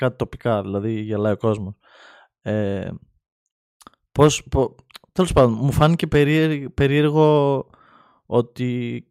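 No technical faults are audible anywhere in the recording.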